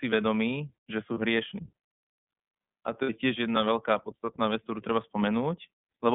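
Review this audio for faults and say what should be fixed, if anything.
The speech sounds thin, slightly rough and synthetic throughout, confined to roughly 200 Hz to 3.5 kHz. That is the iLBC codec: each frame's excitation is coded on its own at a low rate, consistent with the 13.33 kbps, 30 ms-frame mode, which leaves plainly audible coding damage. Prevent it by negotiating a wideband codec such as Opus.

At 1.14 s and again from 3.02 to 3.10 s, the sound briefly freezes into a held, faintly buzzy vowel. These are lost iLBC frames. The decoder concealed the missing packets by repeating the last pitch cycle blended with noise, about 30 ms the first time and 60 ms the second, and recovered cleanly right afterwards. Prevent it with jitter buffering and forward error correction on the network path.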